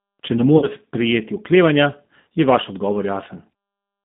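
Speech through a G.729 codec, with the rough, slightly synthetic quality of an 8 kbit/s coder. On a spectrogram, energy sits between 150 Hz and 3.7 kHz and is empty above. VoIP packet loss concealed by the speech codec occurs at 0.58–0.68 s (about 40 ms lost) and 2.21–2.25 s (about 60 ms lost). At each point the decoder stretches the last sound into a fading buzzy tone or coloured noise. The waveform shows the level decaying there.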